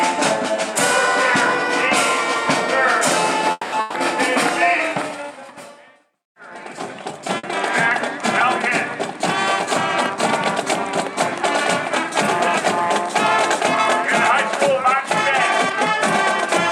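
At 3.51 to 3.74 s comes a call audio freeze, likely caused by packets held up until the jitter buffer ran dry. The last sound is stretched into a fading buzz or hiss for about 210 ms, ending in about 10 ms of silence. Then the audio resumes exactly where it stopped, so nothing is lost and everything after plays 210 ms later.

A burst of packet loss follows at 3.80 to 3.96 s, and another at 7.37 to 7.45 s. Each is a short held, dimming buzz or hiss of 140 ms and 60 ms. Unlike the freeze, the sound picks up further along, and that stretch of audio is simply gone.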